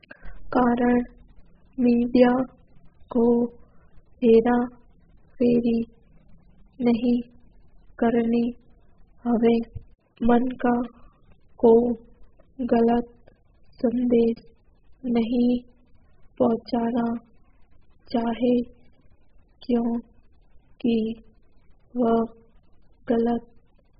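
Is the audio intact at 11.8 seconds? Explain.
No, not really. At 11.8 seconds the speech is carrying the same damage it has throughout, which sounds like AAC compression, likely AAC-LC squeezed very hard. Nothing comes through above 5 kHz, so consonants lose their edge, and what's left has that smeared, warbly, fizzy texture. The encoder is quantising each frame's spectrum so coarsely that whole bands drop out or turn to noise, which fits a bitrate down around 8 kbps.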